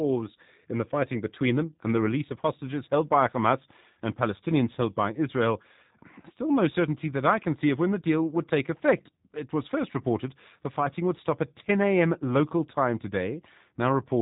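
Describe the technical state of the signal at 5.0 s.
At 5.0 s the speech carries G.729 codec damage, present throughout the clip. The sound is rebuilt from a vocal tract filter, a pitch predictor and a few pulses per 10 ms frame, at a rate that fits an 8 kbit/s coder. Nothing passes above 3.8 kHz, and the voice has a plainly rough, synthetic quality. A simple low-pass filter would dull the sound without that coarse, artificial texture.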